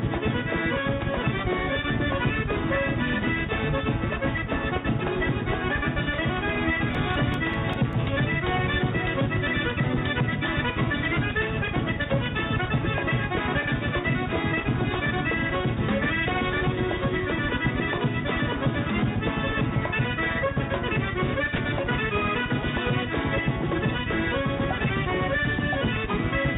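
From 6.95 to 7.93 s you get CD scratch ticks: six short clicks, roughly six a second, none longer than about 2 ms. That's a scratch on the disc wiping out more data than error correction can rebuild on each rotation, so the player patches or mutes those samples.

Then at 21.56 to 21.58 s the sound briefly gives way to soft, steady noise for 20 ms before returning. That's likely sound dropped by the voice detector: the sender judged that moment to be background, stopped transmitting, and the receiver filled the gap with comfort noise. The whole clip is band-limited, with nothing above 4 kHz, which fits a narrowband call codec.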